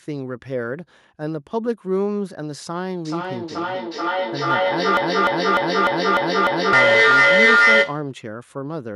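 From 3.05 s to 8.17 s there is feedback echo between two devices: speech from one device on the call is played into a room where a second device's microphone picks it up and returns it, beyond the reach of either echo canceller. Each phrase comes back at a fixed spacing of roughly four tenths of a second, thinner and more resonant on each pass. The loop is strong enough that the repeats build rather than fade, reaching about 10 dB above the direct speech.

From 4.97 s to 6.73 s, overlapping the echo, a broken-record loop takes over: a 0.30 s fragment plays back to back six times, identical on each pass. This is likely a stalled player, encoder or stream resending the last block it held. The speech that should have occupied those 1.76 s is missing, and normal audio resumes at 6.73 s with the echo still present.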